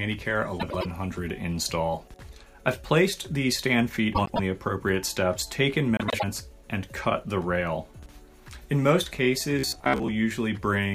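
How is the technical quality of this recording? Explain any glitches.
The recording has two kinds of glitch: three reordering faults and one late robotic stretch.

Frames out of order, at 0.60–0.86 s, 4.15–4.40 s and 5.97–6.24 s: two adjacent runs of about 104.5 ms each were decoded in swapped order, so each stretch plays halves exchanged, a garbled flutter.

Robotic sound from repeated short buffers, 9.59–10.10 s: likely starved playback repeating a 15 ms chunk, skipping roughly half the real audio, imposing a rigid metallic buzz near 66.7 Hz.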